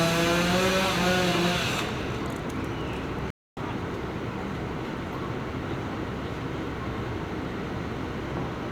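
A stream reconnect runs from 3.30 to 3.58 s. The connection dropped, leaving about 265 ms of silence, then the player reconnected and restarted its decoder mid-stream. The sound resumes roughly 150 ms further on, so a short stretch is skipped.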